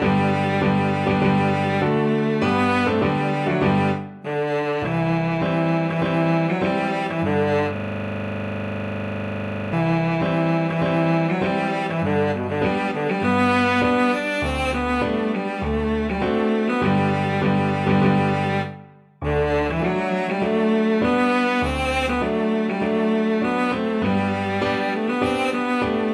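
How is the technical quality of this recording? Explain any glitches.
The recording has one glitch. A system hang loop runs from 7.76 to 9.73 s: the system froze while the audio hardware kept replaying its ring buffer, so one 40 ms slice of sound repeats 49 times, giving a rough, rattling buzz at 25 Hz.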